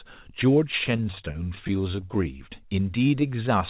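Speech over a narrowband call path, with nothing above 4 kHz, which fits G.711. From 0.72 to 2.25 s there's repeated stalls (stutter): late packets kept draining the jitter buffer, so short gaps of up to 28 ms get filled, nothing lost but choppy. Then 2.99 to 3.59 s has a jitter buffer slow-down, with repeated pitch periods stretching it by 87 ms, about 87% speed, same pitch.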